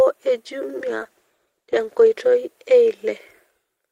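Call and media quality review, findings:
Call bitrate drop, 0.83–3.31 s. Speech turns rough and watery, highs muffled. Worst for about 1.1 s. Encoder side: bandwidth estimate fell, Opus coding more coarsely and trimming high frequencies. Fits a drop from roughly 32 to 13 kbps. Recovers afterwards.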